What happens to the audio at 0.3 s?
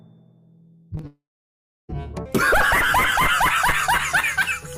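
Nothing goes wrong at 0.3 s; the audio plays through that moment intact, with no dropout, click or other fault.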